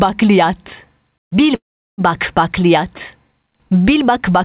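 From 1.55 to 2.01 s there is a call audio freeze, most likely because packets were held up in transit and the jitter buffer ran dry. The receiver stretches the last sound into a brief fading buzz or hiss, then goes silent for about 0.37 s of the 0.43 s gap. When the audio resumes, it picks up where it stopped with nothing lost, but it now runs about 0.43 s later. Throughout the narrowband call path, nothing is heard above 4 kHz.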